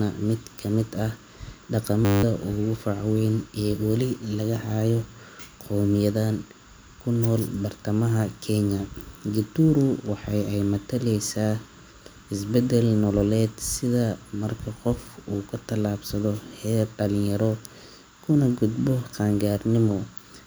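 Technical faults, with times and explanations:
2.05–2.23 s, system hang loop: the speech freezes into a steady buzz at 100 Hz. One 10 ms slice repeats exactly 18 times while the sound hardware keeps replaying its ring buffer during a stall, which fits a buffer of about 10 ms. Roughly a fifth of a second of speech is lost before "ugu fac weyn ee". Unlike a dropout it leaves no silence, and the loop is too short for a stutter, so it fuses into a pitched tone.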